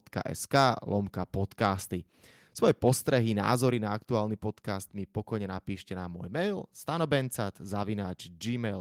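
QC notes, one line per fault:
0.54–0.67 s, microphone overload: just before "lomka podcasty" peaks flatten about 2 dB past the converter ceiling, likely from excessive input gain, adding harsh crackle.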